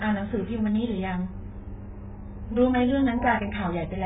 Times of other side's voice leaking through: none

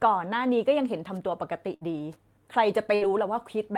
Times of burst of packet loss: 1.75-1.84, 2.95-3.04

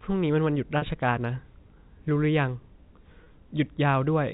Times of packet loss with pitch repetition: 0.78-0.82, 3.24-3.26

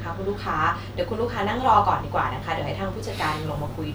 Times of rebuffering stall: none

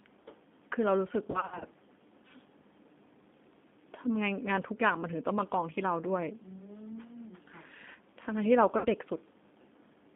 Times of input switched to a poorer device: none

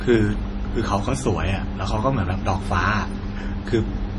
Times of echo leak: none

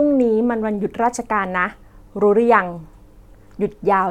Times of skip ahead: none

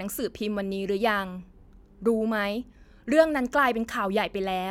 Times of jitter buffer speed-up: none

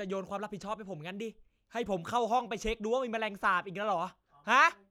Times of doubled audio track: none

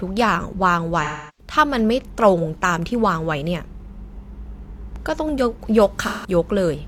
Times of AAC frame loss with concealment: 1.03-1.52, 6.02-6.30

